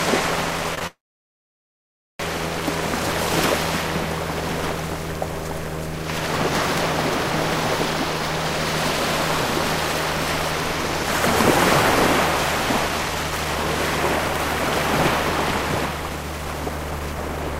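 Right at the start there are two short stalls from a late packet, at 0.75 to 0.79 s and 0.79 to 0.83 s. Each time the jitter buffer ran dry, so the receiver held the last sound for about 25 ms and then 15 ms, giving a brief smeared hold with a faint buzz or dip before things carry on with nothing lost.

Just after, from 0.87 to 2.21 s, there's a call audio freeze, likely from packets getting held up in transit. The last sound is stretched into a short fading buzz or hiss and then goes silent for roughly 1.24 s. When the packets turn up, the audio resumes exactly where it stopped, so it's an inserted gap of about 1.3 s rather than missing material.

From 12.89 s to the end you get a jitter buffer speed-up. The receiver was shedding its excess delay by cutting out tiny pitch-period-sized slices over and over, about 0.4 s in total. The sound runs roughly 9% fast at unchanged pitch, so it feels a bit rushed.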